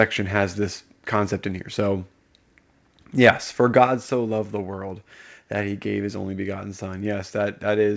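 At 3.26 to 3.30 s the speech has a burst of distortion, most likely microphone overload: the input was driven about 5 dB past what the converter could represent, so the tops of the loudest waveform cycles were sliced off flat, affecting a few percent of the samples in that stretch. It is heard as a brief crackling edge on the loud syllable. On a waveform the peaks appear squared off. On a spectrogram a smear of added harmonics rises above the voice, stopping at 8 kHz, where the G.722 call path removes everything higher.

At 3.87 s the microphone volume steps down by about 4 dB, likely the call software reacting to that overload by lowering the device's input level in a single move. Voice and background both drop at once rather than fading. The waveform envelope shows a clean step to a lower height, and on a spectrogram the whole band turns dimmer from that moment on.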